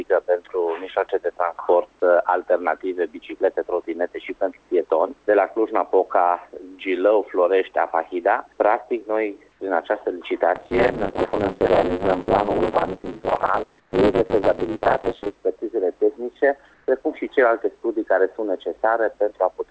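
At 9.52 s, 13.80 s and 16.74 s, the sender likely stopped transmitting during pauses, so comfort noise in place of the background fills 80, 120 and 140 ms gaps with steady, featureless hiss, about 2 dB quieter, about 7 dB quieter, then about 1 dB louder. From 10.55 to 15.35 s, buffer tearing sets in: writer and reader cross mid-period, so about half of each buffer repeats audio about 30 ms old, producing a robotic 100 Hz buzz.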